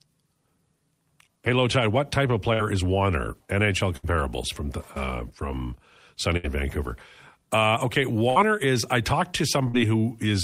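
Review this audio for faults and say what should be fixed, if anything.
A burst of packet loss occurs five times: 2.53 to 2.62 s, right after "what type of"; 3.97 to 4.06 s, just before "from the uh from"; 6.37 to 6.47 s; 8.30 to 8.39 s, before "is I talked"; and 9.68 to 9.77 s. Each time the receiver extends the last sound for about 54 to 67 ms, fading it into a held buzz or hiss, then resumes with about 60 ms of speech missing. Adding forward error correction or packet redundancy, plus a deeper jitter buffer, would prevent it.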